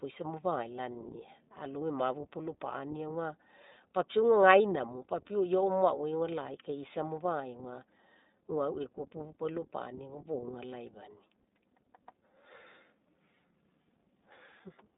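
Speech runs through the iLBC codec for the whole clip. Nothing reaches above about 3.7 kHz or below about 200 Hz, and the voice has a plainly audible rough, buzzy, synthetic grain. What separates this from a simple telephone-band filter is that roughness: each short frame's excitation is rebuilt on its own, which fits 20 ms frames at about 15 kbps. Plain band-limiting would sound muffled but stay smooth.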